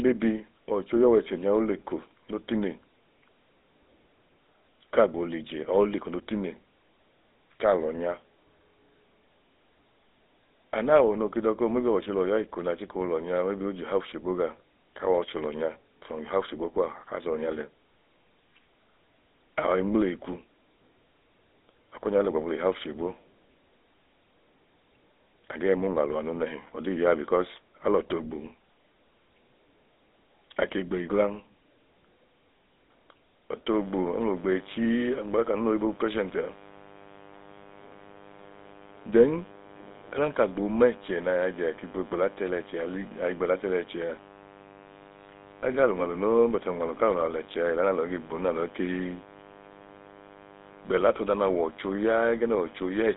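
From the first second the speech has a buzzy, gravelly roughness, and the sound is boxed into a narrow band from about 250 Hz to 3.7 kHz, with nothing at all above 3.8 kHz. This is the GSM full-rate codec. It rebuilds the voice from a vocal-tract model excited by a coarse, regularly spaced pulse train, and the damage is plainly audible, which fits the 13 kbps full-rate coder.

At 33.66 s a steady, raspy buzz begins and lasts until the clip ends at 53.17 s. It sits roughly 20 dB below the speech. This is mains buzz at 50 Hz. A dimmer, a rectifier or a missing shield lets sharp switching spikes into the signal twice per mains cycle. Those spikes form a dense row of 50 Hz harmonics that spreads up into the speech band, so it sounds harsh rather than like a low hum.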